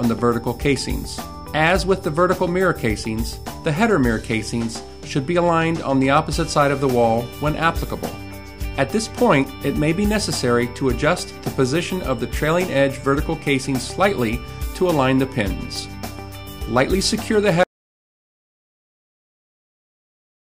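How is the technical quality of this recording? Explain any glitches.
One glitch stands out: an audio dropout to silence at 17.64 s, lasting about 3 s to the end. The sound cuts off abruptly into silence with no room tone, likely from lost input while recording continued, unlike a fade-out or noise gate.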